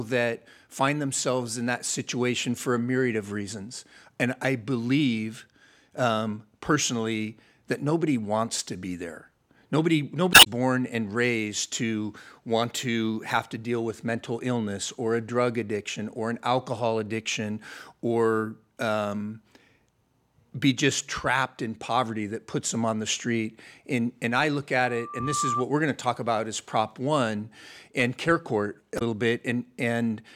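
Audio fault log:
10.31–10.47 s and 28.95–29.02 s: damaged data in a compressed stream. Each is a brief glitch, the first just before "born and raised to". Corrupted frames were misread, and the decoder lost sync until it found the next valid frame header.
24.84–25.65 s: loudspeaker feedback squeal. After "and I look", a 1.2 kHz tone swells over about half a second to roughly the speech level, then stops before "we're going to talk". A microphone picked up its own loudspeaker, and the loop gain exceeded one at that frequency.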